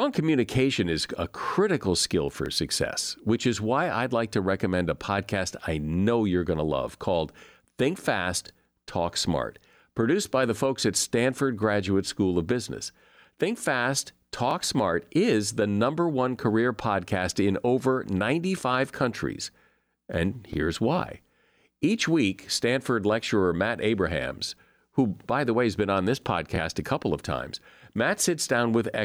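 A small stutter recurs through this speech clip at 2.46–2.48, 8.48–8.51, 14.51–14.53, 20.53–20.56 and 26.56–26.59 s, each a brief doubled fragment. These are overlapping chunks: the audio was handled in 6.0 s blocks, and each block begins about 25 ms before the previous one ended, so that sliver plays twice at every join, about 6.0 s apart.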